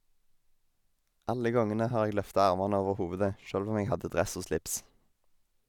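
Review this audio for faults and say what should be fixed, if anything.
Nothing stood out on listening to the speech, so there is nothing here that needs fixing.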